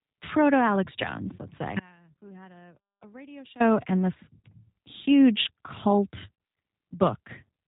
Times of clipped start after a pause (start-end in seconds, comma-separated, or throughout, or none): none